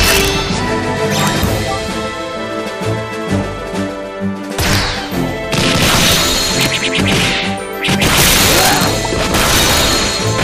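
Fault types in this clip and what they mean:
Integer overflow: at 0.04–0.28, 1.20–1.44, 4.73–4.75, 5.83–6.16, 6.61–6.66, 8.06–8.87 and 9.34–9.93 s, loud peaks drive the level about 0 to 4 dB past the largest integer. Instead of being limited, they wrap to the opposite sign, producing violent cracks much sharper than clipping.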